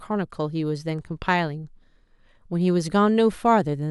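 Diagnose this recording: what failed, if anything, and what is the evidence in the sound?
Nothing in this short bit of speech points to a failure at any stage, so there's no fault to diagnose here.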